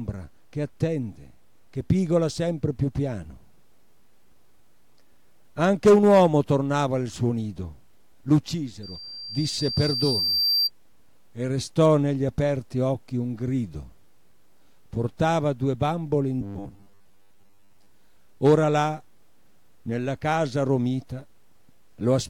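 Loudspeaker feedback squeal runs from 8.83 to 10.70 s. A microphone is picking up the loudspeaker it feeds, and at 4.7 kHz the loop's gain passes unity, so that one frequency keeps reinforcing itself on every trip round. The tone swells over roughly one and a half seconds into a piercing whistle that ends up about as loud as the rest of the audio, then stops at 10.70 s.

From 16.41 to 17.86 s the sound turns robotic, with a rigid, metallic buzz at 100 Hz laid over it. The audio still loosely follows its original shape, but most of that stretch is missing, replaced by repeats. The likely cause is repeated short buffers: when fresh audio arrives too late, the playback software refills the gap by looping the last short segment. A 100 Hz buzz fits a segment about 10 ms long, looped back to back.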